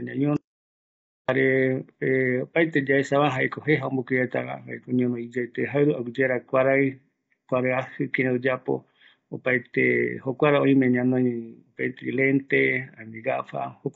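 Right from the start the speech has that rough, grainy texture you get from low-delay AAC compression, most likely AAC-ELD at a low rate, in the region of 24 kbps. The short frames can't pin down the pitch harmonics cleanly, so noise fills in between them, and the damage is plainly audible throughout. There's also nothing above about 7.8 kHz, which leaves the top end dull.

Then at 0.37 s the audio drops out to silence and stays dead until 1.29 s, a gap of about 0.92 s. It's plain silence, with no room tone underneath, so it reads as the input being lost rather than a quiet passage. The likely cause is a disconnected device, a failed link or an accidental mute, with the recorder carrying on writing silence. Whatever was said in that stretch is simply gone.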